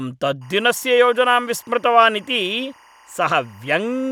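It's a speech clip, and from 0.41 s right through to the end there's timecode bleed: a chirpy warble flipping between roughly 1 and 2 kHz, sitting around 30 dB under the speech. The rhythm suggests 23.976 fps linear timecode leaking in from a neighbouring track or cable.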